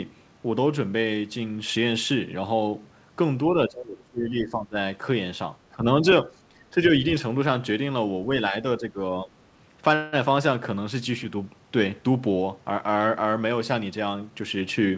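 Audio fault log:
3.48–4.76, 5.68–5.85, 6.02–6.06, 6.25–7.04, 8.5–8.97 and 9.23–9.3 s, speech suppressed in double talk: the voice dips by up to about 20 dB and breaks up in pieces, worst in the first stretch. It's likely the echo canceller clamping down while the far end talked over it.
9.95–10.16 s, call audio freeze: the last sound gets stretched into a short buzzy fill for about 176 ms, with no silence. It's likely delayed packets draining the jitter buffer. Speech resumes where it left off, so it's just a gap with 176 ms more lag.
14.06–14.9 s, jitter buffer speed-up: the speech runs about 9% fast with the pitch unchanged, so it sounds a bit rushed. The receiver is trimming roughly 70 ms of tiny pitch-period slices to work off surplus buffered delay, and the G.722 path above it carries nothing over 8 kHz.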